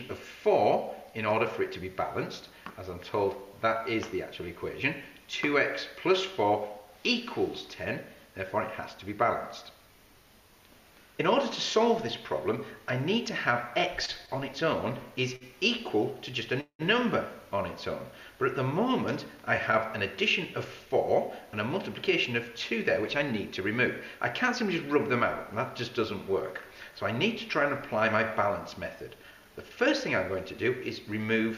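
From 14.05 to 16.82 s the audio drags and catches four times, the longest hold about 185 ms: repeated stalls (stutter), as late packets left the jitter buffer empty.

From 18.67 to 26.92 s the sound runs slightly faster at unchanged pitch, about 2% fast: a jitter buffer speed-up trimming short pitch-period pieces to cut built-up delay.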